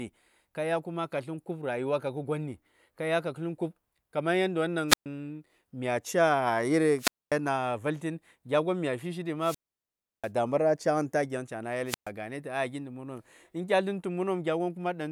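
Four wireless microphone squelch dropouts hit this speech, at 4.88, 6.97 (just after "mya ca"), 9.40 and 11.86 s. Each time the FM link fades, hiss rises briefly, then the receiver's squelch mutes everything for 0.12, 0.24, 0.69 and 0.12 s.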